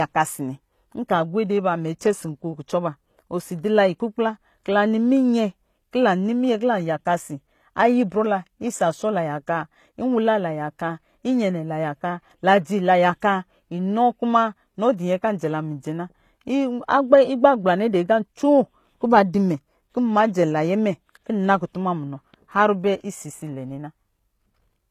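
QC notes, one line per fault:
Throughout: low-bitrate audio saved at a high bitrate. The speech carries the artefacts of a heavily compressed source, yet nothing above 14.9 kHz survives, a ceiling that sits oddly against the large file. The likely cause is a low-bitrate encode, the character fitting something like HE-AAC around 24 kbit/s, later re-encoded to MP3 at a high rate near 256 kbit/s. The second pass preserves the damage it was handed and cannot restore what the first discarded.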